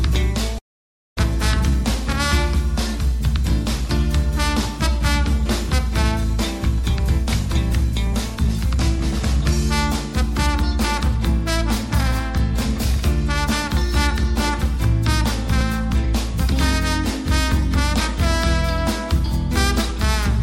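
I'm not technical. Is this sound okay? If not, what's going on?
No. At about 0.58 s there's a call audio freeze: the sound stalls for roughly 0.6 s, mostly silence. The likely cause is delayed network packets. When it resumes, it picks up right where it stopped, so nothing's lost; it just runs a bit later.

After that, there's jitter buffer speed-up as the system works off that backlog by quietly trimming tiny slivers of sound. From 6.83 to 9.53 s it runs 4% fast, then 2% fast from 10.23 to 17.62 s and from 18.62 to 19.99 s. The pitch stays the same.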